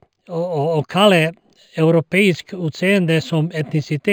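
Imaging from linear upsampling runs through the whole clip. The speech was raised in rate, likely from 11 kHz to 48 kHz, by joining samples with straight lines. This dulls the top and leaves a mirrored image near 5.5 to 11 kHz, roughly 30 dB down, heard as faint metallic shimmer on sibilants.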